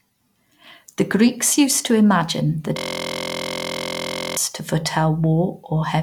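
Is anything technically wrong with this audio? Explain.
Yes. A system hang loop runs from 2.77 to 4.37 s, right after "used to imagine that". The playback system stalled while the hardware kept replaying one 23.22 ms chunk, which fits a 1024-sample buffer, dozens of times, producing a steady 43.1 Hz buzz instead of speech.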